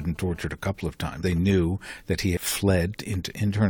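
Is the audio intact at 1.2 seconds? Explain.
No. At 1.22 s, just after "tortured a couple of", compressed frames were skipped. Whole frames of the encoded speech never reached the output, either missing from the file or rejected by the decoder as damaged. Playback jumps ahead by roughly a tenth of a second, which points to about four frames of around 23 ms each. The join is heard as a sudden break where the speech skips forward.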